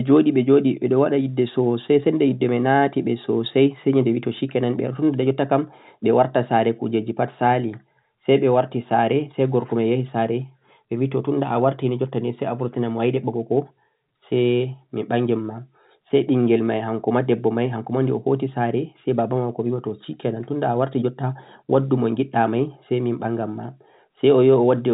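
Nothing's wrong with this speech recording; it simply carries the narrow sound of ordinary telephone coding, with nothing above about 3.8 kHz.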